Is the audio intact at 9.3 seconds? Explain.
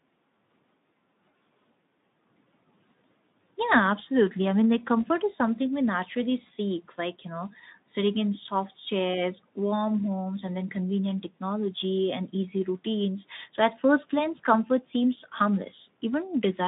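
Yes, the speech at 9.3 seconds is intact, with no fault at that moment.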